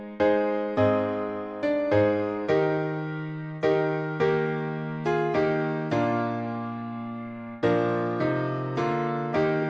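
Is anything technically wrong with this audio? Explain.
Yes. Throughout, the resampler restarted on every block: each 100 ms block converted from 44.1 kHz to 48 kHz alone, leaving edge errors heard as 10 Hz ticks, seen as evenly spaced vertical spectrogram lines.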